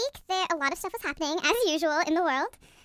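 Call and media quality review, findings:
Speech high and hurried for the whole clip: 1.45x speed, pitch up 6.45 semitones together. Wrong sample rate at the playback/output stage: samples clocked out without rate conversion; the ratio fits 22 kHz capture played at 32 kHz.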